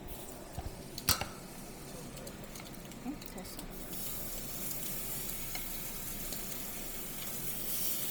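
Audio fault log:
throughout: Bluetooth LC3 compression. The audio was likely squeezed through the LE Audio LC3 codec at a low rate, which fits roughly 32 kbps with 10 ms frames. Much of the upper spectrum is discarded and replaced with synthetic noise, leaving a heavily grainy, breathy edge.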